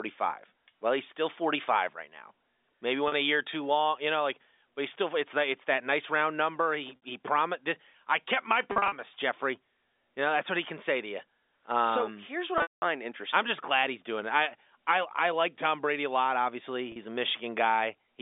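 Packet loss with pitch repetition at 3.08, 6.96, 8.72–8.92, 12.58–12.82 and 16.92 s: the receiver repeats the last pitch period over each gap. Short losses give a brief buzzy hold. The 200 ms run near 12.6 s fades to silence before the speech resumes.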